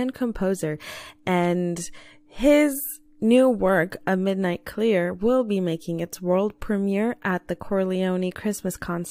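Nothing in this speech recording registers as a technical fault.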